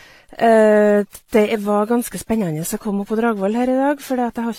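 From start to end, the speech carries layered compression damage. The top end is dull and cut off. Artefacts from the different codecs sit on the voice together. The sound points to transcoding between lossy codecs, likely AAC at a low rate, then WMA, then HE-AAC near 40 kbit/s. Each pass coded the earlier damage and added its own. The lowest cut-off in the chain remained.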